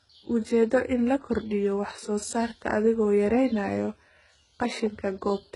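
From start to finish the speech carries heavy HE-AAC compression damage, likely from a very low bitrate near 12 kbps. The treble is synthetic, copied up from lower bands, so s sounds turn gritty and lispy, with nothing at all above 11.1 kHz.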